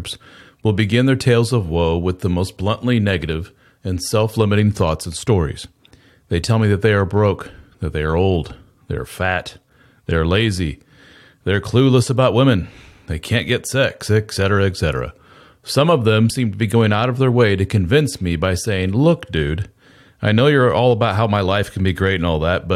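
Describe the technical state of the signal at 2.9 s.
At 2.9 s the speech signal is intact, with no audible technical fault at that moment.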